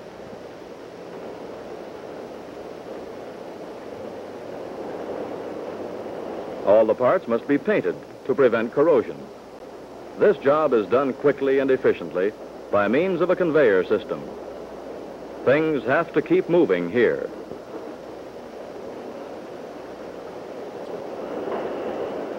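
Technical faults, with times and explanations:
9.59–9.62 s and 20.85–20.92 s, corrupt frame decoded: two short blips where a few compressed frames had flipped bits and the decoder played them anyway. The first covers about two frames and the second about three, which fits their short lengths. With the gains or codes misread, energy lands at frequencies that don't belong there, so each one comes out as a quick chirpy burst. They peak around -30 dBFS and -25 dBFS.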